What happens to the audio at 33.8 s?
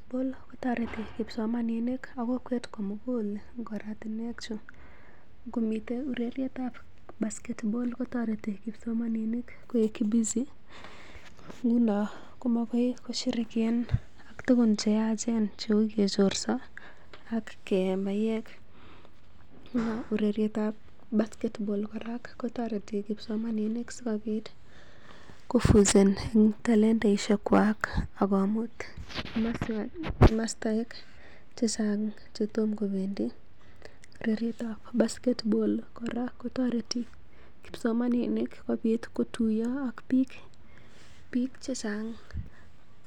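Nothing goes wrong at 33.8 s; the speech carries on intact through that moment.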